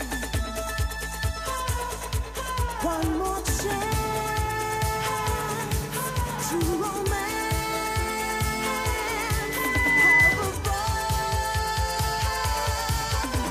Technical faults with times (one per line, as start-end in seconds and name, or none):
9.17-10.51 loudspeaker feedback squeal